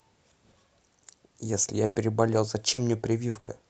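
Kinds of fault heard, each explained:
Repeated packet loss (robotic sound): from 1.85 to 3.49 s the speech turns choppy, with five holes, the longest 100 ms, about 300 ms missing in all. Lost or late packets were patched by carrying the preceding sound forward, around 200 ms rebuilt this way.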